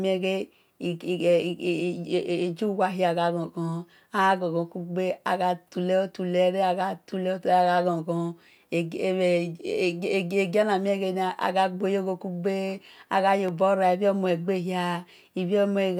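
At 13.48 to 13.51 s a single loud pop cuts across the speech. It peaks a few decibels above the signal. A sudden voltage pulse, likely from a plug, switch or static discharge, was added to the audio. The speech carries on underneath.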